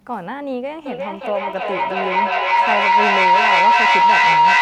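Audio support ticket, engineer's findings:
Feedback howl from 0.86 s to the end. Tone around 1 kHz, swelling to about 11 dB over the speech, repeating roughly every 0.4 s. Probably two devices in one room on the call, with the mic-to-speaker loop gaining level each pass. Mute one.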